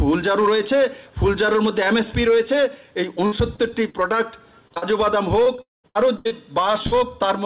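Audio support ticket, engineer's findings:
Hard clipping throughout: crackle and flat-topped peaks on loud passages, overdriven by about 5 dB with a few percent of samples cut. Probable cause is gain staging before the converter or encoder.

Repeated packet loss (robotic sound) at 3.26–3.96 s: choppy stretch with four gaps, the longest 58 ms and about a fifth of the span concealed. Jitter buffer repeatedly extending the last sound.

Same at 5.44–6.33 s: five gaps, the longest 79 ms, about a quarter concealed. The sound turns robotic and broken, with pieces missing.

Short concealed packet loss at 4.68–4.72 s, 4.74–4.78 s and 4.78–4.84 s: brief smears, 20 to 40 ms missing each. The decoder bridged the holes from the preceding sound.

At 5.62–5.86 s, within the second robotic stretch, the sound fades out and falls silent for about 170 ms, with roughly 220 ms lost. Likely a long network dropout. 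The concealment tails off before playback resumes.

Burst of packet loss at 6.87–6.94 s: a short held buzz or hiss fading out, 40 ms missing. Consecutive packets were lost or arrived too late for playout.

Band limit at 4 kHz is consistent with the G.711 mu-law call path at 64 kbps and is not a fault.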